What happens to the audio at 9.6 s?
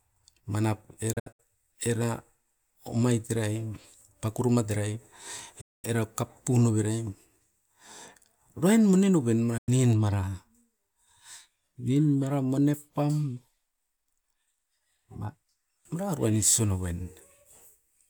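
Just after "uruain mone noven" the speech fades out in about 8 ms and drops to silence from 9.58 to 9.69 s: a digital broadcast dropout, where the receiver muted over roughly 96 ms of missing frames, consistent with about three lost.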